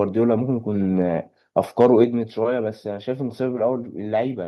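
Microphone overload at 1.80 to 1.86 s in this speech recording flattens the tops of the loudest peaks, giving a brief harsh crackle. The input is likely set too hot, driving the converter about 2 dB past its limit and clipping a few percent of samples. Microphone volume stepped down at 2.04 s, just after that distorted peak, where voice and background both fall by about 4 dB in a single step. This is likely the call software's automatic gain control cutting the device's input volume in reaction to the clipping.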